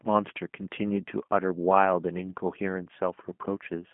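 From start to finish the speech carries G.729 codec damage. The voice is rebuilt at what sounds like 8 kbit/s from a vocal tract filter, a pitch predictor and a few pulses per frame, which leaves it plainly rough and synthetic. It sits in a telephone band of about 200 to 3400 Hz. On a spectrogram, nothing appears above 3.6 kHz, so energy stops at a flat ceiling. The harmonics look smeared and blocky in time, and the waveform lacks fine detail.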